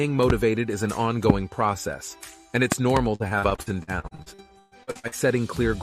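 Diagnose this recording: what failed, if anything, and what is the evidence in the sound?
Loud pops sit in the analogue or driver stage: single pops at 0.30–0.32 s (about 15 dB above the signal) and 1.30–1.32 s (about 20 dB), then a pair between 2.72 and 2.99 s (about 20 dB). The sound carries on beneath each one. On a waveform they are tall spikes standing clear of the envelope. A spectrogram shows thin full-band vertical lines. A voltage step from a plug, switch or static transient is the likely source.

Repeated packet loss, giving a robotic sound, points to the network path from 3.15 to 5.14 s. The audio turns choppy as holes keep recurring, the longest about 119 ms. About 35% of the stretch is concealment: roughly 0.7 s of patched sound and another 0.7 s simply missing. The decoder fills each gap by extending the last fragment, so a spectrogram shows smeared, repeated frames alternating with blank slots.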